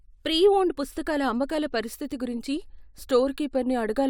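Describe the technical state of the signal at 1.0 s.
At 1.0 s the speech signal is intact, with no dropout, clipping, glitch or other fault audible at that point.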